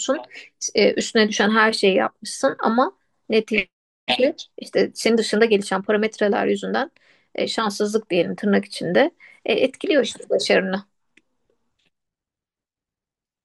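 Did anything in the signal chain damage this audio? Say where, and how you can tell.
No, nothing in the chain audibly damaged this speech recording, and there is no stage to point to.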